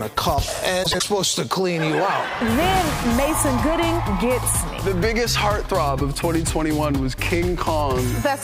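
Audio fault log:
0.83–1.03 s, frames out of order: two neighbouring blocks of roughly 78 ms each were decoded in swapped order, so this stretch flutters garbled.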